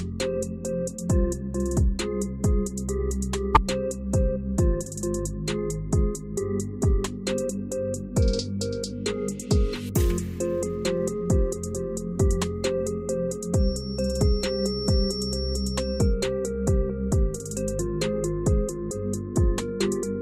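The audio has two technical faults. From 3.54 to 3.57 s the sound jumps ahead and a brief glitch replaces it, likely a broken MP3 bit reservoir: after frames went missing, the next frame decoded borrowed bytes from the wrong frame. The gap is about one 24 ms frame long. On a waveform it shows as a sudden discontinuity, and a spectrogram shows a short disturbance. From 13.52 to 16.16 s a thin, steady feedback whistle at 5.5 kHz sits behind the sound, roughly 15 dB below it and swelling and fading slowly in level. It is likely a loudspeaker-to-microphone loop held just at the edge of feedback. On a spectrogram it appears as a narrow horizontal line at 5.5 kHz across that span.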